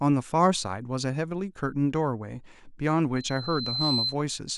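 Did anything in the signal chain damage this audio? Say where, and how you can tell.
Yes, a loudspeaker feedback squeal in the mic-to-speaker loop. A 4.1 kHz tone swells from 3.16 to 4.16 s, reaching speech level within about 0.7 s, because loop gain exceeded one there.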